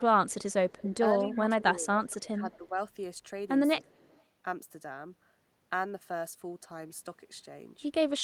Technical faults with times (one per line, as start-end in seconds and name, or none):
0.00-0.80 echo leak
0.80-2.77 speech suppressed in double talk
1.19-1.40 echo leak
2.09-2.16 echo leak
2.52-2.57 echo leak
3.84-4.23 echo leak
3.86-4.12 speech suppressed in double talk